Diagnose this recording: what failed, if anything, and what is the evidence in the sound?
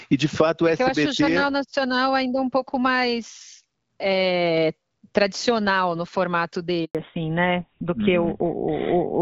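The network dropped out for a moment here: a handover gap right after "é tradicional no formato". The speech dies away quickly at 6.85 s and stays silent until 6.95 s, about 100 ms, while the call switched links. Nothing sent during that switch was delivered.

Right after the gap there's a fallback to narrowband, which happens at the codec stage. Before 6.95 s the call sounds like HD Voice (AMR-WB, consistent with around 12.65 kbit/s). From 6.95 s to the end, nothing comes through above 4 kHz, so the voice sounds duller and rougher. It sounds like GSM full rate took over.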